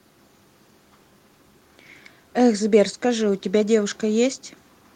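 No technical faults can be heard anywhere in the speech. There is nothing to place on the timeline.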